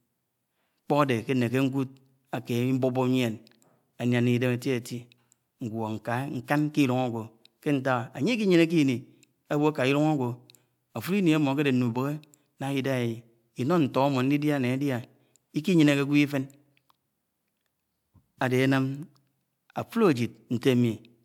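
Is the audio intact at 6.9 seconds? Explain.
Yes, the audio is intact at 6.9 seconds, with no fault audible at that point in the speech.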